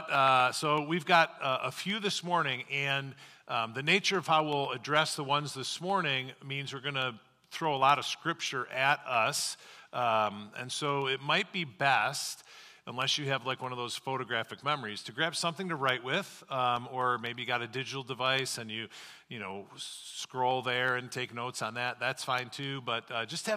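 Periodic USB or driver dropouts run from 0.15 s to 23.51 s: every 0.125 s something blocks the audio path and a tiny fraction of a millisecond is skipped. The result is a steady ticking, eight per second, around two hundred in all, audible wherever sound is present.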